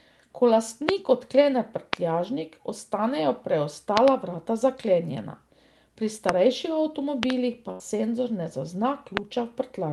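At 0.89 s a loud pop cuts through the speech, followed by another at 1.93 s. A double pop runs from 3.97 to 4.10 s, just before "vrata zaklenjena". Further single pops come at 6.29 s and 9.17 s, and a second double pop spans 7.23 to 7.32 s. Each is a sharp transient roughly 20 to 25 dB above the speech, which continues underneath. The likely cause is a voltage step or pulse, such as static or a switch or connector glitch, entering the signal chain.

From 7.71 to 7.83 s there is a burst of packet loss, ending just before "senzor ne". The receiver fills about 83 ms by extending the preceding sound and fading it down. Playback then resumes with about 80 ms of the original speech skipped.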